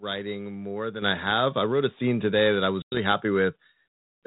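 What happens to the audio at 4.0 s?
Nothing goes wrong at 4.0 s: the speech carries on intact there, with the band-limited telephone character of G.726 ADPCM at 32 kbit/s.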